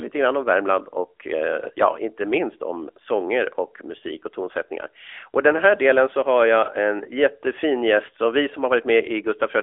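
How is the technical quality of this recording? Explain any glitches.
The recording is degraded by one fault that runs through the entire clip: the speech has passed through an AMR narrowband mobile codec.

Throughout, the AMR-NB coder rebuilds speech from a vocal-tract model and sparse pulses, leaving plainly audible buzzy, synthetic artefacts consistent with a mid-rate mode near 10.2 kbps. Telephone band-limiting to roughly 300 Hz to 3.5 kHz makes it thin and boxy. A spectrogram would show energy cut off sharply near 3.7 kHz, with nothing above it.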